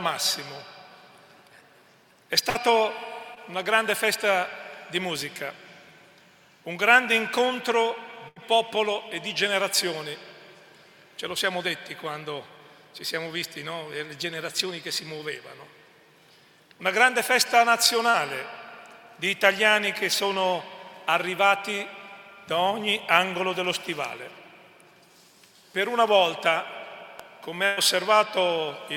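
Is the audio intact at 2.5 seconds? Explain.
No. A burst of packet loss hits from 2.49 to 2.57 s. A run of packets arrived too late or not at all. The receiver held the last sound for 54 ms, letting it fade. It then skipped ahead, so 60 ms of audio is missing.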